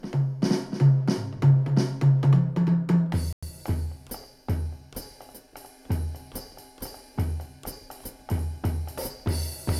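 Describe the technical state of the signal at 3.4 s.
At 3.4 s the signal is in a dropout: from 3.33 to 3.43 s the audio cuts to silence for about 0.1 s, then resumes. The gap is clean and total, with no fade. This is likely a Bluetooth stall, where radio interference delayed packets long enough for the receiving headphones' buffer to empty, so playback halted until the retransmitted data arrived and refilled it.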